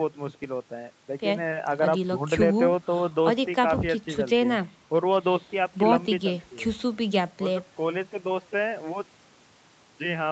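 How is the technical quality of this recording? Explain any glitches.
Nothing stood out on listening to this speech recording, which carries the expected sound of a call's microphone processing with nothing above 8 kHz.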